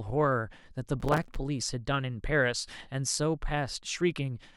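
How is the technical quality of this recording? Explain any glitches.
The recording has one clear glitch: a burst of processor overload crackle from 1.00 to 1.36 s. Over that third of a second the processor repeatedly failed to deliver its very short audio buffers in time, each only a few milliseconds long, and each missed one was filled with stale audio, giving a rapid train of hard-edged discontinuities, something like thirty in a row. It sounds like gritty tearing over the speech. On a waveform, jagged steps appear; a spectrogram shows dense vertical broadband streaks.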